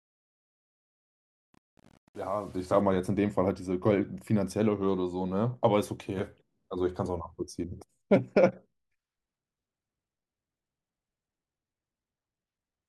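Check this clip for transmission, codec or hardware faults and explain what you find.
One fault is present: truncation distortion on a fade, from 0.00 to 2.81 s, across the fade-in of this speech clip. The fade stage appears to keep too few bits, which fits an 8-bit path with no dither. The quietest passage, up to 2.75 s, is reduced to coarse square steps and sounds gritty until the level rises.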